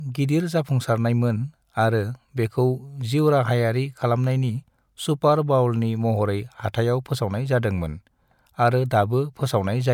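No audible technical faults present.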